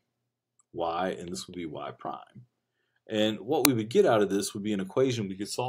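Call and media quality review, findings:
Brief, loud crack at 3.65 s, about 1.5 ms long. Uninitialised buffer in the playback path: one block went out before audio was written to it, so stale memory played as samples. The length fits a 64-sample buffer.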